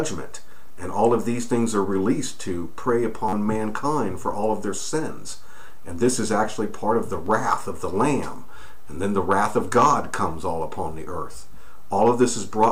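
Three times new audio failed to reach the output in time, so the device replayed its last buffer, a repeated buffer fault. Each repeat is about 10.7 ms long, which fits a 512-sample buffer. From 3.29 to 3.33 s it plays four extra times, making a brief buzzy stutter. At 7.26 s one extra play gives a single click. From 11.32 to 11.34 s two extra plays give a short rattle. Hard joins mark every repeat.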